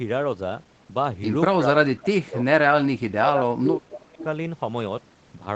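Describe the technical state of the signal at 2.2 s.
Speech suppressed in double talk covers 2.2 s, within the span from 1.58 to 2.39 s. The speech sinks by as much as around 30 dB over roughly 0.7 s of that stretch. The likely cause is the echo canceller meeting simultaneous talk from the far side: unable to tell the near talker from its loudspeaker echo, it turned both down, so the speech here dips in level.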